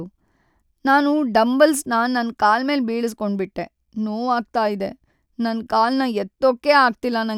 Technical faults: none

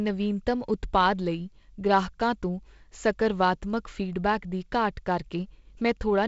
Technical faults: none

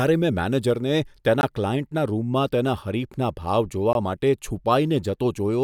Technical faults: gap between chunks

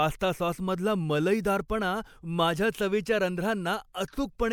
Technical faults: pre-echo

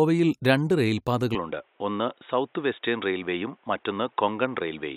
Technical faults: input switched to a poorer device

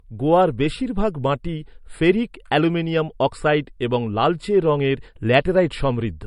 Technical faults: channel delay (comb filtering); low-bitrate audio saved at a high bitrate

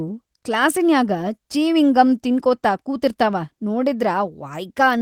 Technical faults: none

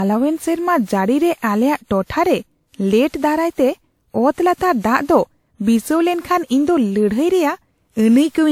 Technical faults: generation loss

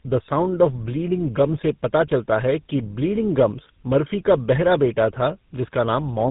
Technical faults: tandem speech coding

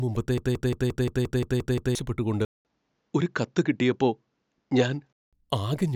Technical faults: broken-record loop; input switched to a poorer device

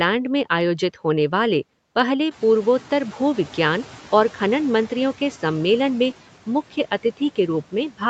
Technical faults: noise suppressor catching up

